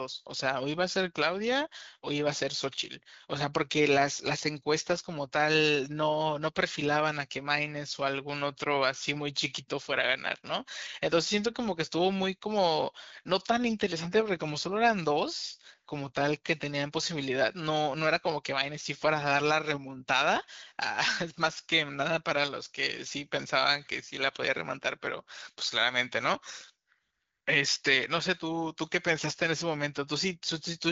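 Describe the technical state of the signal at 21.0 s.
At 21.0 s the speech is intact, with nothing more than the band-limited character of the AMR wideband (HD Voice) codec running normally at 12.65 kbit/s.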